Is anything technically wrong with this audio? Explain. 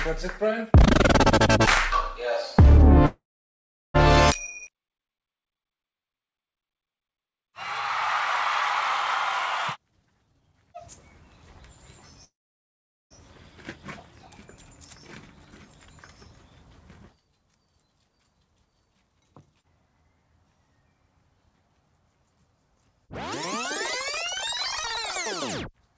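Yes. There are several timing faults in this audio, all typical of a real-time call stream.

Call audio freeze, from 3.06 to 3.96 s and from 12.25 to 13.13 s. The likely cause is packets held up in transit until the jitter buffer ran dry. Each time, the last sound is stretched into a brief fading tail, then about 0.74 s and 0.78 s of silence, before the audio picks up exactly where it stopped. Unlike a skip, nothing is lost; time is inserted.

Skip ahead, at 4.30 to 4.33 s. Roughly half a second of audio is dropped, and the two sides are spliced almost directly with only a tiny gap. This differs from the freezes because content vanishes instead of a pause appearing.

Jitter buffer slow-down, from 4.63 to 7.51 s. The receiver repeats single pitch periods and bits of pauses over and over to rebuild its reserve. This adds 317 ms, so the sound plays at about 89% speed with unchanged pitch and drawn-out sounds. 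There is no gap, which separates it from a freeze.

Jitter buffer speed-up, from 9.78 to 10.81 s and from 17.12 to 17.52 s. Short pitch-period slices are cut out repeatedly to shrink an overfull buffer. The first stretch runs at about 153% speed and loses roughly half a second, so it sounds clearly hurried. The second runs at 114% and loses roughly 70 ms. Pitch stays the same, unlike a simple fast playback.

Nothing is audible above 8 kHz, which fits a G.722 call codec at 64 kbps.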